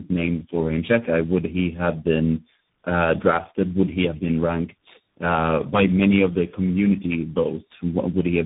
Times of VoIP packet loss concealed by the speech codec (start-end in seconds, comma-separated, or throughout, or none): none